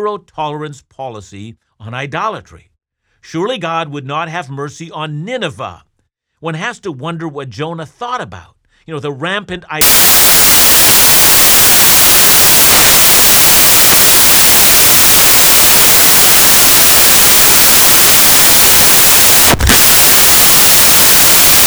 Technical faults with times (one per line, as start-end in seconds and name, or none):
9.81-21.67 samples built from the wrong bytes